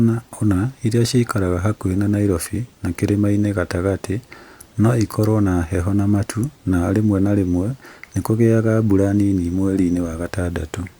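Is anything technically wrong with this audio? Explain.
No, nothing technically wrong can be heard in this speech recording.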